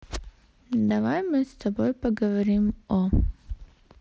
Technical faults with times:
0.89 concealed Bluetooth headset packet loss
2.69 concealed Bluetooth headset packet loss

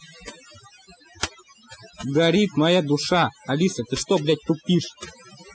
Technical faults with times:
0.00-5.54 overdone noise removal

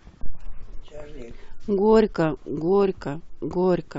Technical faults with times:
none

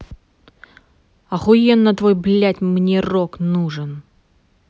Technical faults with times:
none

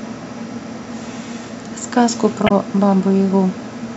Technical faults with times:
2.46-2.51 damaged data in a compressed stream

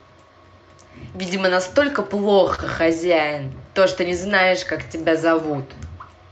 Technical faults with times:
2.35-3.36 repeated stalls (stutter)
4.28-5.12 jitter buffer slow-down

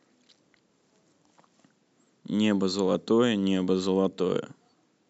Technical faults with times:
none

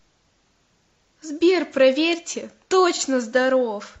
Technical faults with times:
2.95-3.01 AAC frame loss with concealment

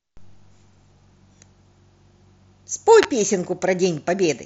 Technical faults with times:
3.03 electrical switching spike

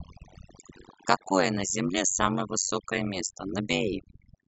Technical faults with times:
0.00-4.47 overdone noise removal
0.00-4.47 overlap-add ripple

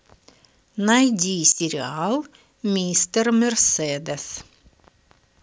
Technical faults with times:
1.52-1.60 sudden gain jump

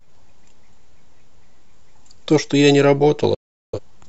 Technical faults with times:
3.34-3.79 digital broadcast dropout

